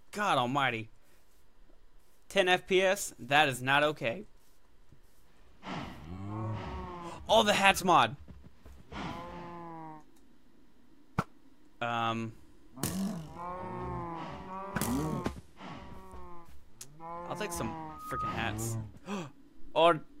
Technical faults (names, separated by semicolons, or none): loudspeaker feedback squeal